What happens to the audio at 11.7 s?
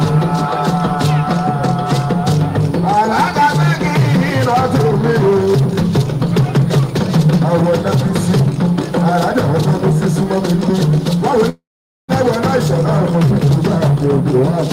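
At 11.49 s the sound stalls in a call audio freeze until 12.11 s. The last bit of sound is stretched briefly, then there's roughly half a second of silence. Most likely packets got held up and the jitter buffer ran dry, so about 0.6 s of gap was inserted and the audio resumes where it stopped with nothing lost.

Underneath that, there's USB whine running through the whole clip, a fixed-pitch tone on a 1 kHz spacing that is strongest at 9 kHz and sits around 35 dB below the signal. It's the bus's 1 ms frame activity leaking into the audio through power or ground.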